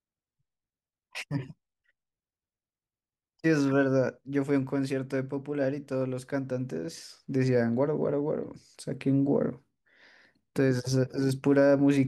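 No dropouts, clipping, glitches or other technical faults turn up anywhere in the recording.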